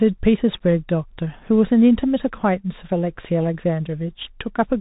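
Throughout, Bluetooth CVSD headset codec damage is plain. Nothing passes above 3.8 kHz. The one-bit step lags, so s sounds scratch over granular hiss.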